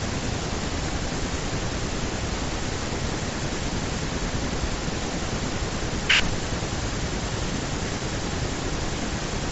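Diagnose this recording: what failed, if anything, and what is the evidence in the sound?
Nothing failed; no fault is audible in this recording.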